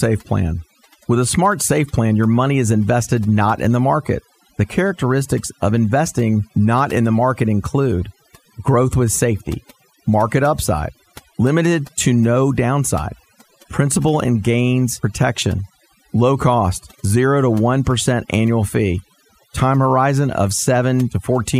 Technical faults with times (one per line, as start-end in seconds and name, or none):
0.00-21.59 overdone noise removal